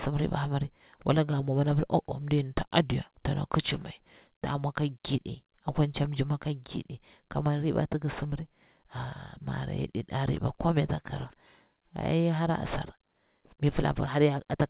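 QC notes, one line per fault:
No fault to note in this speech clip.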